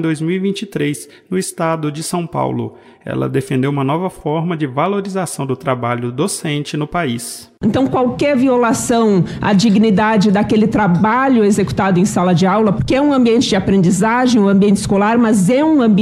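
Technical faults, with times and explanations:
0.17–15.95 s, clock slip clicks: faint regular ticks about every 0.15 s, likely two unsynced clocks drifting roughly 150 ppm apart, dropping or repeating a single sample.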